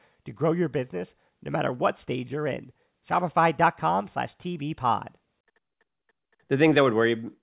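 A short speech recording, and nothing technically wrong turns up anywhere in it.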